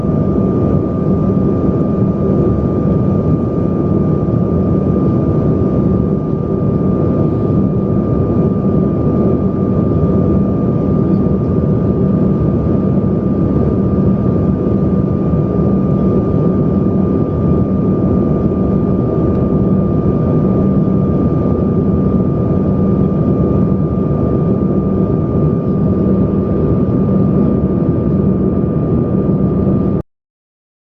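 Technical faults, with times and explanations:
30.01–30.90 s, cut-off end: the sound just stops dead mid-event at 30.01 s and falls straight to digital silence, with no decay or tail at all. The final buffers never got written or played out, so the recording gets chopped rather than ending naturally.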